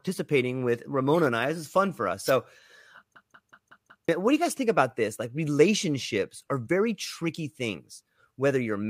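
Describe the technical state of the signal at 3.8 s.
At 3.8 s the signal is caught in a system hang loop running from 3.16 to 4.09 s, just before "what do you guys". The driver stalled while the hardware kept replaying its ring buffer, so one 0.19 s slice of speech repeats five times at 5.38 Hz, which fits an 8192-sample buffer. It sounds like a mechanical stutter. Unlike a dropout or packet repeat, the copies are sample-identical and rigidly periodic, and about a second of audio is lost.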